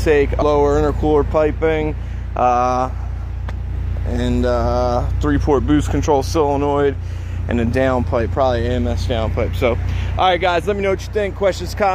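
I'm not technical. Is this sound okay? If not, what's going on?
No. At about 0.38 s the sound jumps ahead, losing roughly a third of a second, a fault called compressed frames skipped. Chunks of the compressed file were never played, which fits about seven frames of 46 ms each.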